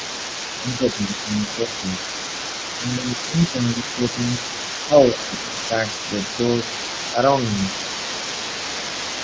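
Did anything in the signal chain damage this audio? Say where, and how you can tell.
Yes. The damage sits in the call processing stage. The other side's voice leaks through for the whole clip, from 0.0 to 9.2 s. A second talker sits under the main speech at roughly 10 dB down. The device was playing the far end on a loudspeaker, and the microphone picked it up. The likely cause is an echo canceller that never fully removed that loudspeaker signal. So a residue of it rides along with the talker.

The same stage also causes speech suppressed in double talk. The main voice dips by about 5 to 10 dB at 0.6 to 1.32 s, 1.55 to 1.86 s, 2.77 to 3.06 s, 3.23 to 4.17 s, 4.87 to 4.96 s and 5.14 to 5.7 s. These dips line up with moments when both sides talk at once. The likely cause is the echo canceller failing to tell its own talker from the echo. It then turns everything down together.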